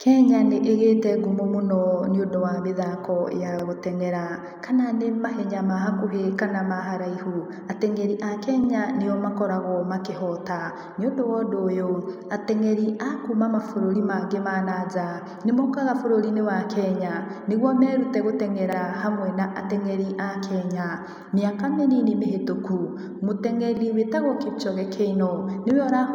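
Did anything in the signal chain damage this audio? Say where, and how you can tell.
Yes: overlapping chunks at 3.59, 8.64, 13.68, 18.73 and 23.77 s, a stutter roughly every 5 s in the speech. At each chunk join, about 44 ms plays twice because every processing block begins before the previous one finished, pointing to a buffering or block-processing stage.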